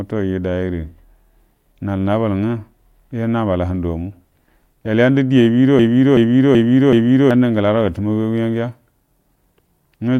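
At 5.79 s the speech gets stuck in a broken-record loop: a 0.38 s fragment repeats exactly, back to back, four times until 7.31 s. Likely the player or stream stalled and kept resending its last chunk, so whatever should have played there is gone.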